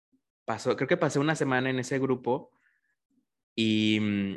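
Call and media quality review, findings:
No faults found in this call and media quality review.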